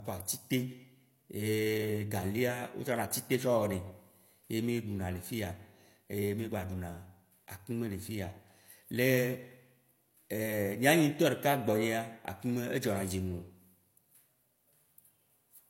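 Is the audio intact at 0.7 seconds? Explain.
No. At 0.7 seconds, as across the whole recording, the speech shows the low-bitrate audio saved at a high bitrate fault. Nothing sounds above 16.3 kHz, and the artefacts of the first encoding remain. The likely cause is an earlier low-bitrate encoding, fitting something like HE-AAC at 32 kbit/s, later re-saved as high-bitrate MP3. Unlike a plain low-bitrate file, the high rate adds nothing back.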